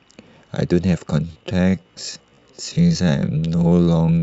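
From 1.23 s to the end, a time-stretched section slows the speech to about 0.58x with pitch unchanged, likely from stretching software repeating short segments, sounding dragged.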